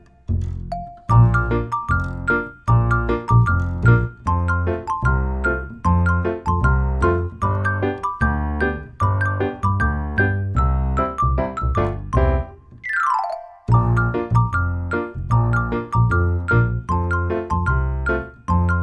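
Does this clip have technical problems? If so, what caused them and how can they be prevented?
No, there are no technical problems to hear in this clip. Since nothing has gone wrong, there is nothing here that needs preventing.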